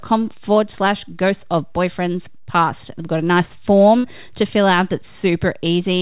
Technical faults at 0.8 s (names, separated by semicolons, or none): none